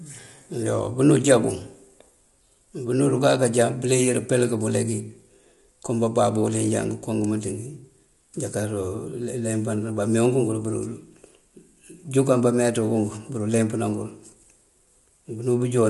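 From start to end the speech sounds rough and grainy, with a hiss-like fuzz filling the gaps between the harmonics, and the top of the spectrum is cut off, with nothing above about 11.6 kHz. The damage is plainly audible throughout. The likely cause is low-delay AAC compression: its coarse quantization at a low bitrate cannot code the spectrum cleanly, so the coding noise spreads between the harmonics. The roughness fits a low bitrate of around 32 kbps.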